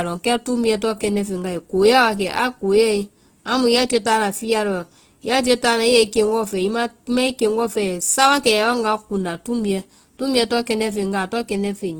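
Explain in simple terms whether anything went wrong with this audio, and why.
Something did go wrong: the speech was likely squeezed through Opus compression using its music-style mode at a very low data rate, so the encoder had too few bits for the detail in each frequency band. Instead of leaving gaps, it patched those bands with borrowed or noise-like filling. From start to finish, the speech sounds grainy, rough and noisy, with clear tones turned fuzzy, though the full treble range is still there.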